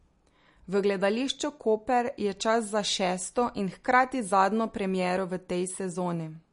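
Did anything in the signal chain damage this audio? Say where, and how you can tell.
Yes. Across the whole speech clip the sound is watery and swirly, with smeared consonant onsets and nothing at all above 10.6 kHz. That points to the codec stage, likely MP3 compression at a low bitrate, which fits roughly 40 kbps, where the encoder cuts the treble and lets weak components flicker between frames.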